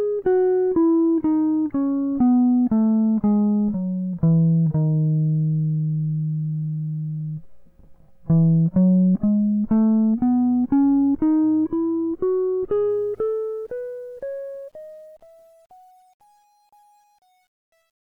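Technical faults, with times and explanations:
12.90–18.11 s, truncation distortion on a fade: The music fades out from around 13 s to 18.1 s, but the fade stage keeps too few bits and adds no dither. As the level drops, the waveform collapses onto a handful of coarse steps, which fits a resolution of about 9 bits. The tail turns gritty and grainy. From 14.92 s to the end the grit is at its worst instead of dying away cleanly.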